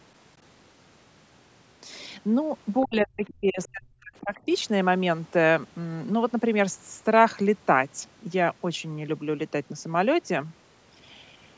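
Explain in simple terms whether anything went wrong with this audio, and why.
From 2.83 to 4.49 s the speech dips and drops out in pieces, nearly to silence, for about a second and a half: speech suppressed in double talk, likely because both sides spoke at once. Faint scraps of another voice slip through at 3.28 to 3.34 s and 3.64 to 3.68 s, which is the other side's voice leaking through, likely loudspeaker echo the canceller missed.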